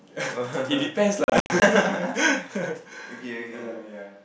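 From 1.24 to 1.62 s a gritty crackle tears through the speech. This is processor overload crackle: about ten buffers of roughly 20 ms each were missed and left as silent gaps.

At 2.94 s the speech suddenly turns roomy and hollow, with little level change and room noise around 30 dB down, until the end. This is likely a switch to a distant microphone.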